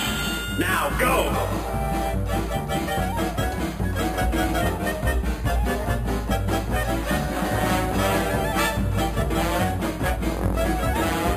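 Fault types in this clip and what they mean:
Imaging from sample-and-hold upsampling: samples were repeated unfiltered, pointing to a rate near 11 kHz. A metallic fizz sits about 17 dB down, mirrored between 5.5 and 11 kHz.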